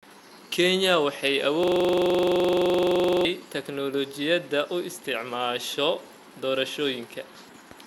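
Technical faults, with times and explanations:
1.64–3.25 s, system hang loop: the playback side stalls and the sound hardware keeps replaying the same 42.67 ms chunk from its ring buffer, which fits a 2048-sample buffer. That slice repeats around 38 times at 23.4 Hz, so instead of a clean buzz you get a fast, rattly stutter pitched around that rate. Normal audio picks back up right before "teknoolajiyada u isticmaasho" once the system catches up and refills the buffer.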